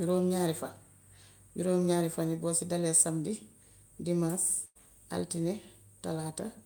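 A speech recording with one dropout: at 4.65 s the sound stops moving forward and turns into a held, fading buzz or hiss for roughly a tenth of a second, then picks up again at 4.77 s with part of the speech gone. The cause is a burst of packet loss. Several consecutive packets never arrived in time, so the receiver padded about 98 ms by stretching and fading the last audio it had, and about 100 ms of speech was simply lost.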